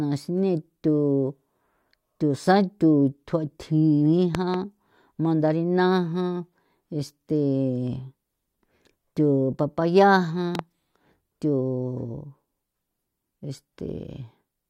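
At 4.35 s the speech gets hit with a loud pop, actually two sharp pops close together running to about 4.56 s, and the same double pop shows up again from 10.55 to 10.61 s. Both stick out roughly 15 dB above the speech, which carries straight on underneath. The likely culprit is a sudden voltage spike, from a plug, switch or static, getting into the chain and being shaped into a thump on the way through.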